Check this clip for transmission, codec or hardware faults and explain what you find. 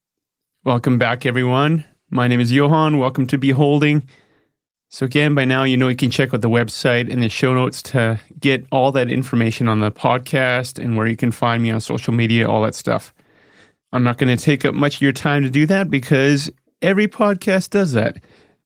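No faults found: the speech carries the ordinary Opus voice compression, fullband and in hybrid mode, with only the light coding texture that fits a rate of around 24 kbps.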